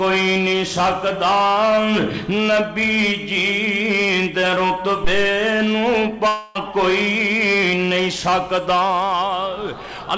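A couple of things jump out in this audio, which comes through a call path that runs out above 8 kHz, fitting a G.722 codec at 64 kbps. At 5.04 s there's a deep phantom power thump, a supply switching on a live input, with the step pushing through the coupling capacitors and dying away within about 72 ms, though the disturbance lasts until 5.36 s. Then from 6.28 to 6.57 s you get a long network dropout: roughly 280 ms of audio likely never arrived, and the receiver papers over about 270 ms of it by smearing the last sound into a fading buzz or hiss before things pick up again further on, minus the lost stretch.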